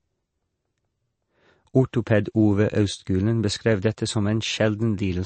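MP3 compression runs throughout the speech: nothing is heard above about 8.3 kHz, and the sound has a plainly audible watery, swirling texture. This is likely a low-bitrate MP3 encode, around 35 kbps, where the encoder removes the treble and lets weak frequency lines flicker on and off between frames.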